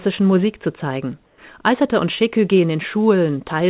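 From 1.26 to 1.38 s the real background gives way to a steady, featureless hiss about 3 dB quieter, likely comfort noise from discontinuous transmission. Unlike a dropout, the sound never goes silent.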